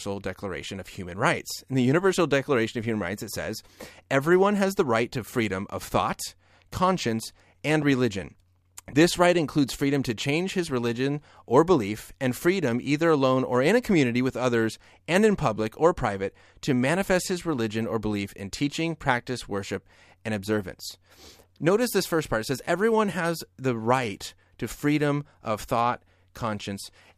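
At about 7.82 s, right after "of thought conscience and", there's a loud pop, actually two of them in quick succession, lasting roughly 0.12 s, through 7.94 s. They peak around 5 dB above the speech, which keeps going underneath. That's the sound of a sudden voltage jump landing on the signal, likely from a plug, switch, static discharge or a driver hiccup, with the downstream circuitry shaping it into a sharp double thump.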